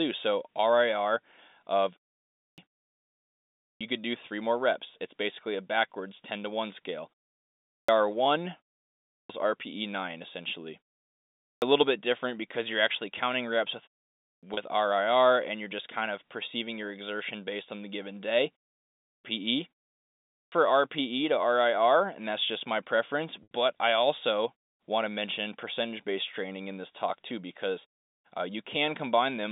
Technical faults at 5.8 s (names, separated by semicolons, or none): none